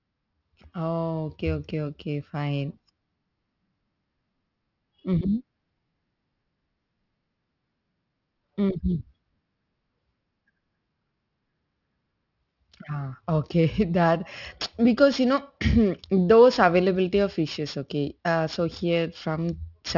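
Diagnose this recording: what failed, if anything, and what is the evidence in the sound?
Sibilants sound gritty and metallic throughout the speech, with energy piled hard against 6 kHz and false tones about 20 dB below the signal. That is aliasing at sample-rate conversion: content above 6 kHz folded back unfiltered, which fits a drop to a 12 kHz rate.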